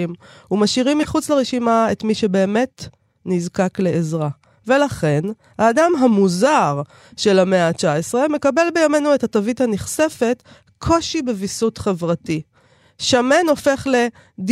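At 1.03 to 1.05 s, a corrupt frame decoded: about one frame with flipped bits was played anyway, so misread gains or codes placed energy at wrong frequencies for that span. It is heard as a brief chirp, squeak, blip or noise burst, peaking around -10 dBFS.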